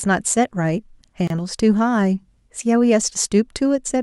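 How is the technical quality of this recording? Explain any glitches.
The recording has one glitch in this speech. At 1.27 to 1.30 s there is a gap at a join of encoded pieces. Separately encoded segments were spliced without trimming their encoder delay and final-frame padding, so about 28 ms of silence opens mid-speech. It has smeared edges, and the speech then resumes where it stopped.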